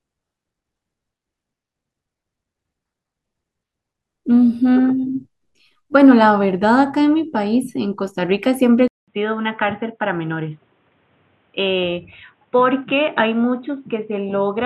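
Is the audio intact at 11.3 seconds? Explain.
No. From 8.88 s to the end of the clip, the speech sounds like the input switched to a poorer device, likely another microphone or a headset's call profile. After a 200 ms silence at the switch, nothing comes through above 3.8 kHz, so the speech turns dull and boxy. It also drops around 5 dB in level over a new background noise sitting around 40 dB down. A simple filter would only cut the highs, without this gap, level shift and fresh noise.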